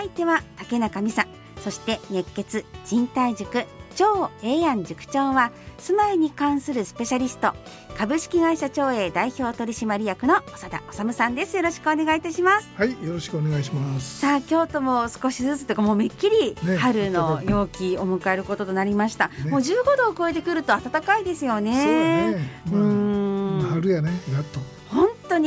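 Nothing stood out as a technical fault on listening to this recording.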